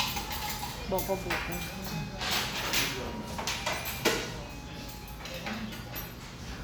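A recording of sounds with no technical fault to report. Nothing in it points to a problem in the capture or playback chain.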